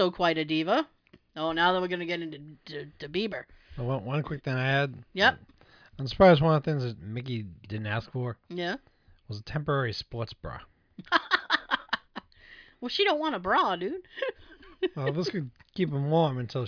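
No audible technical faults anywhere in this speech recording.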